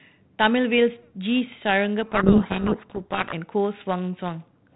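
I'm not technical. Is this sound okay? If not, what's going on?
No. From 2.02 to 3.33 s there is a codec payload misread: the receiving end unpacks the G.726 phone codec's data with each code word's bits in the wrong order, so it rebuilds the wrong signal and the speech is buried under harsh, grating distortion.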